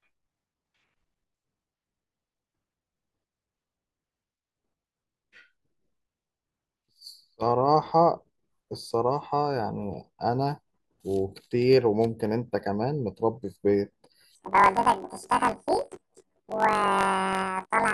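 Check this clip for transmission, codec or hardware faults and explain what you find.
One fault appears near the end of the speech. From 14.35 s to 17.94 s, planar audio is read as interleaved. Each block of left-then-right samples plays twice at double speed, giving speech an octave high with a 46.9 Hz flutter, which fits 1024-sample blocks. Unlike a sample-rate mismatch, the pace stays normal.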